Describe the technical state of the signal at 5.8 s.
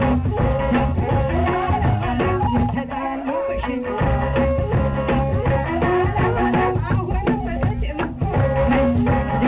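At 5.8 s the audio is intact, carried through the WebRTC call path with the narrowband character of the G.711 A-law codec, with nothing above 4 kHz.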